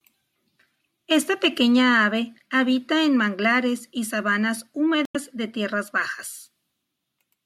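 At 5.03 to 5.16 s, just after "en manglares y sabanas" and before "de tierras", damaged data in the compressed stream produces a short glitch lasting about 130 ms. The decoder misreads the corrupted frames, loses sync and hunts for the next valid frame header.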